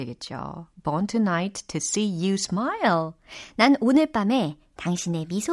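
From 2.86 s to the end, the speech runs fast and sits high. This is a wrong sample rate fault. The samples are being played faster than they were captured, with no conversion in between. Speed and pitch rise together, by a factor of about 1.09. That is roughly 1.5 semitones sharp. The ratio fits audio recorded at 22 kHz but played back at 24 kHz. The voice sounds slightly hurried and high.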